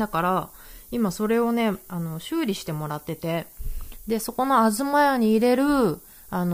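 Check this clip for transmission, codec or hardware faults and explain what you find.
One fault runs through the whole speech clip: low bit depth with noise shaping. The audio sits at 8 bits, and the rounding error is fed back so it piles up toward high frequencies. The result is a steady thin hiss, only about 20 dB below the speech. A spectrogram would show a noise floor climbing sharply toward the top band, even in pauses.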